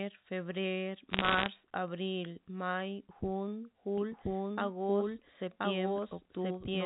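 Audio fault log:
1.10 to 1.48 s: bit errors on a digital phone line. Flipped bits, roughly 0.7 percent of them, knock single samples off course, and each hit on a high bit gives a sharp tick in a burst of crackle over the speech. On a spectrogram these show as thin vertical full-band lines; on the waveform, isolated one-sample spikes.
3.98 s to the end: doubled audio track. A second full-band copy of the speech enters abruptly at about the same level, running roughly a second behind, with no decay or room colour, likely from an edit holding two copies out of step. A spectrogram shows every pattern repeated a second later; the waveform grows denser.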